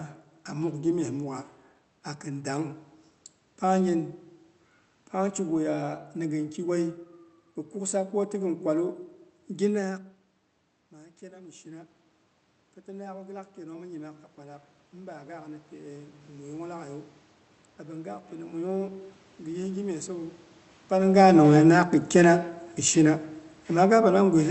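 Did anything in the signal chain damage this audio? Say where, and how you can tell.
Yes. Automatic gain rising in the call processing: after the level drops around 9.5 s, from 10.91 s to 20.37 s voice and room noise swell together by about 14 dB, clawing back most of an 18 dB fall. A talker moving wouldn't lift the background too.

Automatic gain falling, also in the call processing: from 21.01 s to the end, after the talker moves near 21 s, the sound starts loud and sinks steadily, its background going down with it. That shared descent marks the gain control backing off, not the talker retreating.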